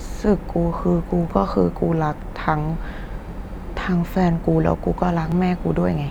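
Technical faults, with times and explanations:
1.30 s, 3.31 s and 5.32 s, overlapping chunks: the speech was handled in 2.0-second blocks, and each new block begins about 7 ms before the previous one finished. That sliver of audio is played twice at every join. The doubled fragment breaks the waveform's continuity, so each boundary gives a brief click or tiny stutter, recurring at a steady two-second spacing across the clip.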